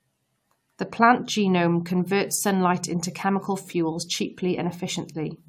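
Generation loss runs throughout the speech, from the first moment to the end. The sound is swirly and hollow, with smeared consonant attacks and nothing above 18.4 kHz, which fits an AAC-LC encode at around 96 kbit/s. The smearing is worse than that rate alone would give, which points to the audio likely having been decoded and re-encoded about four times, each pass adding fresh quantisation noise and spectral holes on a shifted frame grid.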